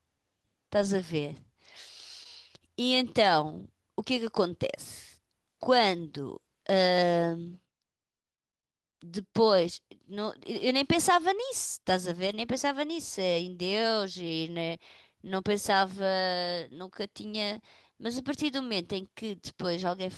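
Lost packets rebuilt from error correction, 0.77 to 0.91 s: about 80 ms of speech turns rough and noisy but never drops out. The next packet carried a low-bitrate backup copy, and the decoder played that copy in place of the missing audio. This span points to four lost packets.

Short concealed packet loss, 2.23 to 2.27 s: about 20 ms of audio arrived too late. The receiver filled about 16 ms by extending the preceding sound, then blended back into the real signal. It is heard as a brief smear or wobble.

Lost packets rebuilt from error correction return at 12.27 to 12.33 s and at 15.27 to 15.29 s. Backup copies again stand in for the missing audio, producing shorter rough, noisy patches of about 40 ms and 20 ms. These fit two lost packets and one lost packet.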